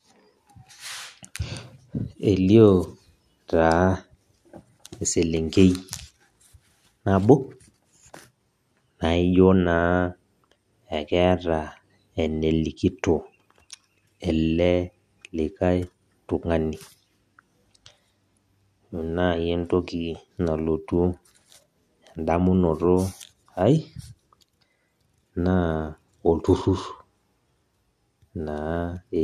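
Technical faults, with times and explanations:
No technical faults are audible in this speech.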